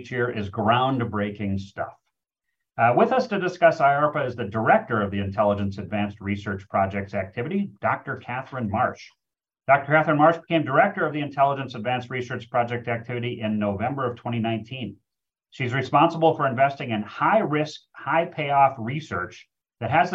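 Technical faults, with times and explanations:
No technical faults can be heard anywhere here.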